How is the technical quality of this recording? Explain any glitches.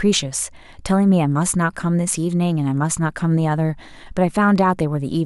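No technical faults are audible anywhere in the recording.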